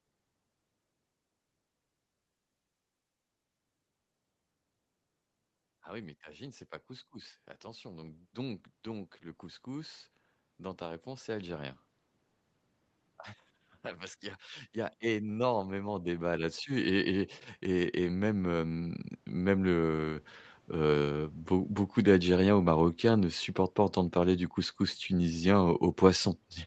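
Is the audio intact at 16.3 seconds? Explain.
No. At 16.3 s the clip sits inside an automatic gain rising event running from 14.74 to 20.29 s, after "parce qu'il y a" and before "heu beau beaucoup d'algériens". The gain control judged the input too quiet and ramped its gain up by about 11 dB, so speech and background noise swell together gradually.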